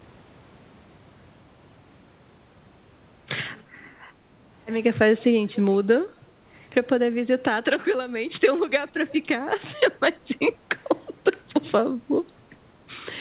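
At 5.55 to 5.77 s and again at 9.11 to 9.18 s there is an echo leak: a faint copy of the speech returns 255 ms after the original, about 20 dB below it the first time and roughly 25 dB down the second. The likely cause is a far-end loudspeaker feeding its microphone past an echo canceller that failed to remove it. On a spectrogram the speech pattern reappears as a weak, time-shifted duplicate, cut off at 4 kHz by the narrowband call path.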